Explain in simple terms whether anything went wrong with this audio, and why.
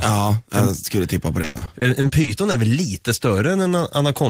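Repeated packet loss (robotic sound) occurs from 1.41 to 2.55 s, right after "jag skulle tippa på" and before "väl lite". About ten short dropouts, the longest 100 ms, were each patched by stretching the previous sound, so about a quarter of that stretch is filler and the speech turns choppy and robotic.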